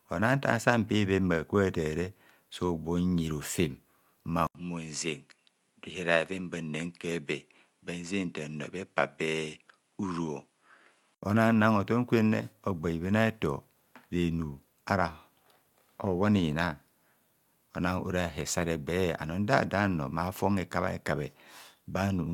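Speech, with the input switched to a poorer device from 4.47 to 11.23 s: after an 80 ms silence the sound goes duller, with nothing above 11 kHz, a few decibels quieter and carrying a faint new noise floor. That mix of changes, rather than a bare filter, likely points to a device change.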